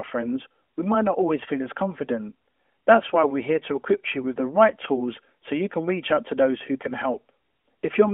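A brief crackle on the peaks at 4.61 to 4.65 s, between "equip you with the" and "tools so you can", is hard clipping. For those 40 ms the speech drove a gain stage about 2 dB past its ceiling, so the waveform tops were sheared flat, scattering harmonics high up the spectrum. The telephone band, roughly 250 Hz to 3.4 kHz with the light coloration of a 12.2 kbps AMR narrowband mobile codec, runs through the whole clip.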